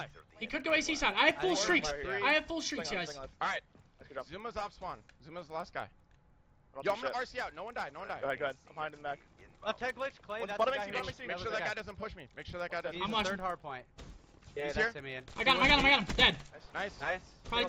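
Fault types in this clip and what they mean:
Resampler restarted on every block: the 16 to 48 kHz conversion ran on each 100 ms block separately, so every block edge carries a small error, heard as a steady tick ten times a second wherever sound is present. Unlike buffer underruns, the ticks are evenly spaced and leave no gaps.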